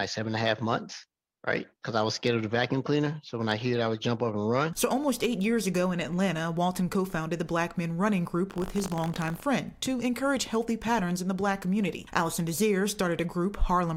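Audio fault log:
8.48–9.42 s, buffer tearing. The writer and reader of a ring buffer have slipped out of step and cross inside each period. A small sliver of every buffer, a few percent, replays audio from roughly 70 ms earlier. Hard joins sit on both sides of that sliver. The repeating splice makes a robotic buzz at 50 Hz, which points to a buffer period of 20 ms. The buzz runs steadily through this stretch and rides on the signal.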